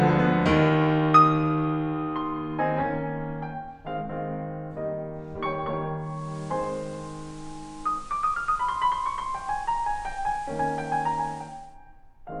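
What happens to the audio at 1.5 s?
Nothing goes wrong at 1.5 s: the music plays through that moment intact, with no dropout, click or other audible fault.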